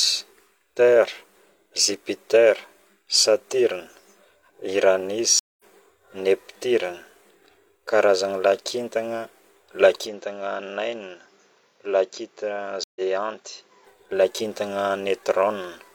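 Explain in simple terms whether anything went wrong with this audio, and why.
Two stream reconnects break the speech: at 5.39 s the audio goes silent for about 0.2 s, and at 12.84 s for about 0.12 s. Each time it resumes slightly further on, skipping a fraction of a second.

From 10.07 s to 13.87 s the sound turns duller and somewhat quieter, with nothing above 7.6 kHz and a faint new hiss. This likely points to an input switched to a poorer device, such as a lower-grade microphone.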